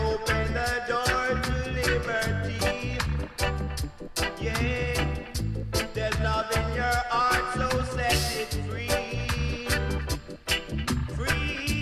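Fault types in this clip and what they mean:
No technical fault can be heard anywhere in the audio. There is nothing to describe for any part of it.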